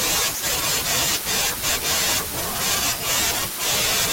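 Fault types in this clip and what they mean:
Sample clock jitter: the converter's clock wobbles by a microsecond or two throughout, adding a rough hiss roughly 25 dB under the speech, strongest on loud, bright sounds.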